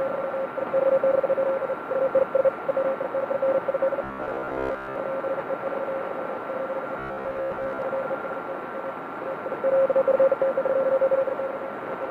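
Everyday sound turns into a rigid, metallic buzz at about 66.7 Hz from 4.04 to 4.96 s and again from 6.99 to 7.82 s. This robotic sound from repeated short buffers likely comes from a 15 ms chunk being replayed while most real audio is skipped.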